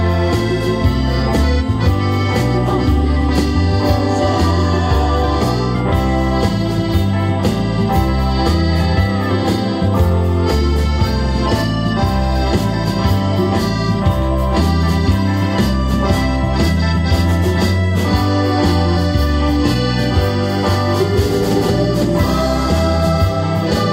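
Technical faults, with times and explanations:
0.9 s to 23.9 s, USB whine: current drawn in the bus's 125-microsecond microframes is leaking into the audio path through power or ground, adding a steady, fixed-pitch 8 kHz tone. It sits roughly 40 dB below the signal, a thin high whine running to the end.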